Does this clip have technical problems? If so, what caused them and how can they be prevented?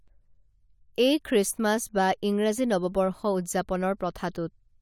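No, there are no technical problems to point to in this speech recording. With nothing going wrong, there is no cause to trace and nothing that needs preventing.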